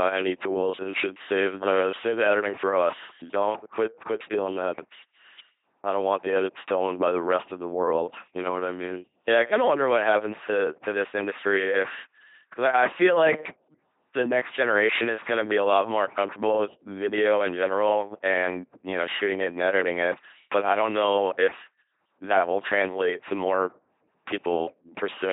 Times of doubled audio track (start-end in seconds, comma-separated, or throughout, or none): none